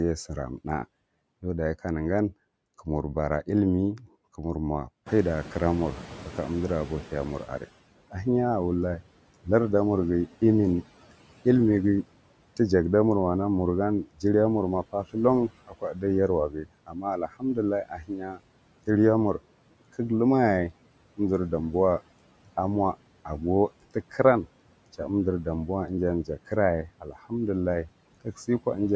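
Noise suppressor artifacts run through the whole speech clip. The suppressor pulls down the bands it judges to be steady noise by about 18 dB, frame by frame. The background sinks in the gaps and swells under the speech. Because this pumping tracks the speech itself, it differs from a gate or from the room noise changing.

At about 5 s the room noise jumps by about 18 dB. From 5.06 to 7.71 s the noise suppressor is catching up. For those 2.65 s its noise estimate lags, so the louder noise comes through only partly reduced and then settles, eventually by about 15 dB. A gradual fade after a sudden step marks adaptation, not a level change in the room.

Speech cut by the noise suppressor follows at 14.04 to 14.24 s, at 15.48 to 18.4 s just after "ma parthlan", and at 26.87 to 27.31 s. Parts of the speech drop by up to about 18, 17 and 14 dB respectively, in total roughly a tenth of a second, a full second and a fifth of a second. 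Soft sounds and endings sound swallowed. Unlike a dropout, the speech dims along with the background rather than falling silent.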